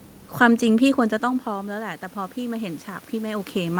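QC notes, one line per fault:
0.95 s to end, automatic gain rising: input falls about 13 dB as the talker moves off, so the AGC slowly lifts voice and room noise together.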